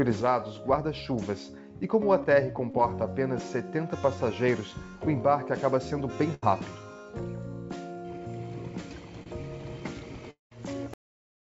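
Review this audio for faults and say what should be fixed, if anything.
Short concealed packet loss at 2.71 to 2.74 s and 9.23 to 9.27 s: packets reached the decoder too late, so the receiver extended the preceding sound for roughly 25 ms, heard as a brief smear or wobble.

Burst of packet loss at 6.34 to 6.47 s: about 70 ms of consecutive packets never arrived. The receiver continued the last sound for around 80 ms while fading it, then skipped ahead slightly.

Long network dropout at 10.31 to 10.52 s: the sound turns into a fading buzz or hiss, then about 140 ms of silence, likely from roughly 210 ms of audio never arriving.

Cut-off end at 10.94 s: the final buffers were never written, so the audio stops mid-sound and drops straight to digital silence with no decay.

The G.722 call path, whose content stops at 8 kHz, is not at fault here. To prevent these faults, stabilise the network link or enlarge the jitter buffer with forward error correction, and flush all remaining buffers before the recording is closed.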